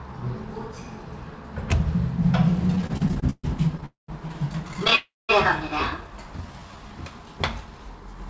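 From 2.68 to 3.84 s, packets kept arriving late and the jitter buffer repeatedly ran dry, producing repeated stalls (stutter). The receiver bridged fourteen gaps, the longest 134 ms, by stretching the last sound, so the audio drags and hiccups with nothing lost.

Right after, from 3.86 to 4.10 s, a call audio freeze follows, likely from packets held up in transit. The sound is carried on for about 225 ms, the last 150 ms of it silent, before resuming where it stopped.

A shorter stutter, 4.68 to 4.93 s, has seven brief gaps of 14 ms at most. A second freeze at 4.95 to 5.31 s fills 336 ms, 200 ms of it silent.

From 6.07 to 6.89 s, a jitter buffer slow-down rebuilds reserve by repeating tiny stretches, adding 118 ms. The sound plays at 86% speed with unchanged pitch. The band ends at 8 kHz, which fits a G.722 call path.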